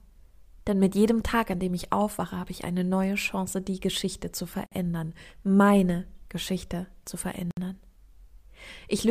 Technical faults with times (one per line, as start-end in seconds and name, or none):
4.66-4.72 gap at a join of encoded pieces
7.51-7.57 gap at a join of encoded pieces